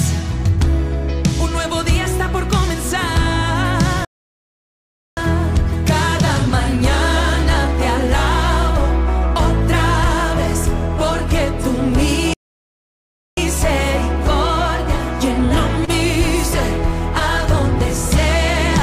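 At 4.05 to 5.17 s and again at 12.33 to 13.37 s the sound cuts out mid-flow for about 1.1 s and 1.0 s, then resumes. These are playback stalls, likely from the player running out of data or its thread being blocked. Each shows as a flat, empty gap in the waveform and a blank vertical band on the spectrogram.

From 15.85 to 15.91 s comes a short stall from a late packet. The jitter buffer ran dry, so the receiver held the last sound for 26 ms and then continued from the same point, with nothing lost. It sounds like a brief smear with a faint buzz or dip, seen as horizontally stretched streaks on the spectrogram.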